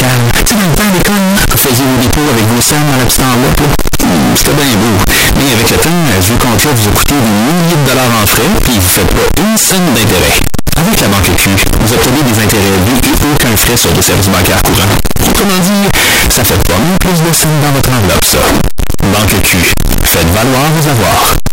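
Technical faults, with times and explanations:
Throughout, signed and unsigned mixed up: the speech is harsh and distorted at a constant, extreme loudness, with quiet gaps as loud as the words. The likely cause is 16-bit samples read with the wrong sign convention, flipping the top bit so every zero crossing jumps across the full range. On a waveform the trace stays uniformly large with no quiet stretches; a spectrogram shows dense broadband energy filling every frame.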